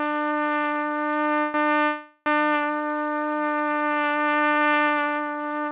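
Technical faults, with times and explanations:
1.40 to 1.56 s and 1.84 to 2.28 s, call audio freeze: the sound stalls and the last moment is stretched into a fading buzzy hiss, about 140 ms the first time and about 420 ms the second, which dies to silence for its final 40 ms. It then resumes exactly where it stopped, so nothing is lost but the playback falls behind. The likely cause is late packets draining the jitter buffer, on a call link band-limited to 4 kHz, as with G.711 A-law at 64 kbps.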